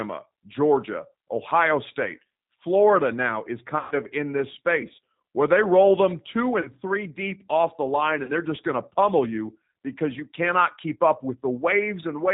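Throughout, the speech carries G.729 codec damage, plainly audible. This 8 kbit/s codec rebuilds each 10 ms frame from a filter, a pitch predictor and a few pulses. Nothing above 4 kHz survives. The voice sounds narrow, slightly rough and synthetic.

VoIP packet loss concealed by the speech codec strikes at 3.79 s, after "now is". About 120 ms is lost, which fits six dropped packets. The decoder extends the last sound into a fading buzzy tone or coloured noise. Recovery lags before "of in this space". Shorter gaps of about 40 ms follow at 6.61 s and 8.24 s, after "they roll them two" and "deep off the line". Each leaves a brief smeared, weakened stretch.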